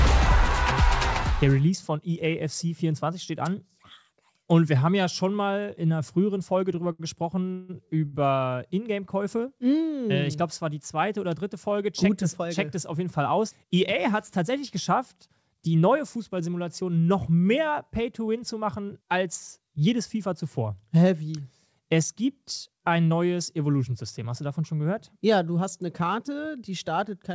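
The audio has passed through a wideband call path: nothing is present above 8 kHz, and the coding noise fits a codec such as G.722 running at 64 kbps. Between 6.76 s and 8.15 s there are repeated stalls (stutter). Packets arrived late, the jitter buffer ran dry six times, and each time the receiver stretched the last sound to fill the hole. Those fills add up to 354 ms, the longest being 158 ms, and they cover about a quarter of that stretch. No audio is actually lost, but the passage drags and stutters. Later, jitter buffer speed-up appears in three places. The buffer had grown beyond its target, so the receiver trimmed short pitch-period pieces to catch up. The audio runs 105% fast from 12.45 s to 17.12 s, dropping around a third of a second in total. It runs 109% fast from 18.20 s to 18.90 s, losing some 70 ms, and 111% fast from 22.79 s to 23.11 s, losing about 40 ms. Pitch stays the same throughout, but these sections sound hurried.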